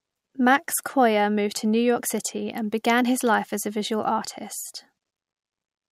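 No technical faults can be heard anywhere in the speech recording; the signal stays continuous and steady throughout, with nothing breaking into it.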